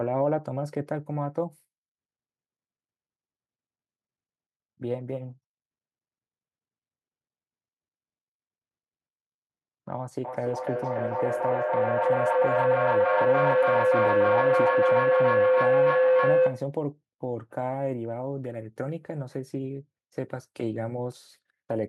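From 10.25 to 16.75 s, feedback howl builds near 500 Hz, pulsing about every 300 ms. A microphone-loudspeaker loop gains level each trip, peaking about 8 dB above the speech.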